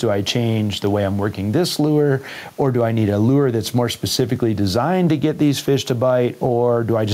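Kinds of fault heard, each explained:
Gain pumping: The input gain is likely set well above what the microphone needs, so a fast limiter or compressor keeps clamping down each time the speech gets loud and releasing in the pauses. Across the whole clip the level swings by roughly 10 dB. The room noise sits about 42 dB below the speech, and the speech sounds squashed, with loud and quiet parts pressed together.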